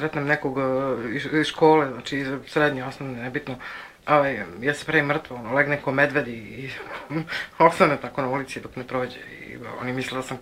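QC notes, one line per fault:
Nothing stood out on listening to this audio.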